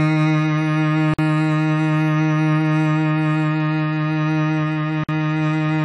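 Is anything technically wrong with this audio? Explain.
Yes. The music has a gap at a join of encoded pieces twice, at 1.14 to 1.19 s and at 5.04 to 5.09 s. Separately encoded sections were butted together with their encoder start delay and final-frame padding left in. The result is silences of about 49 ms and 50 ms with edges smeared by the codec, after which the music resumes exactly where it stopped.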